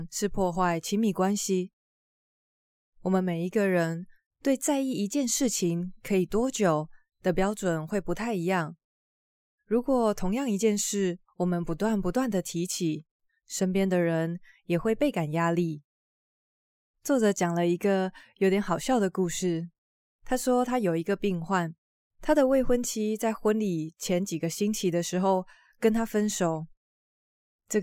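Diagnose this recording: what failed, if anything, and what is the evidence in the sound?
No fault found anywhere.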